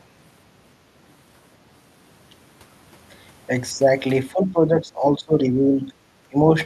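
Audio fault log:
4.33–5.92 s: speech suppressed in double talk. Level dips by about 10 dB in pieces totalling roughly a second, likely an echo canceller attenuating the talker during overlap.
6.30–6.38 s: speech suppressed in double talk. A brief cut of about 20 dB lasting roughly 70 ms, likely from the same suppression reacting to simultaneous far-end activity.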